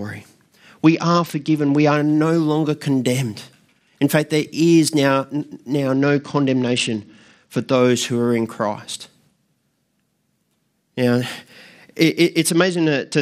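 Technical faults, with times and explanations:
0.85–1.97 s, 5.93–7.76 s and 12.50 s to the end: Bluetooth SBC bit pool drop. Treble dulls and gritty noise rises. This fits a link cutting the bit pool from 28 to 9, near 78 kbps.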